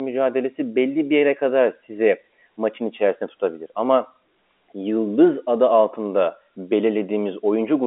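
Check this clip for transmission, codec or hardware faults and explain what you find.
Nothing stood out on listening to this telephone-band speech, which carries the narrow, muffled top end of a G.711 line with nothing audible above about 3.8 kHz.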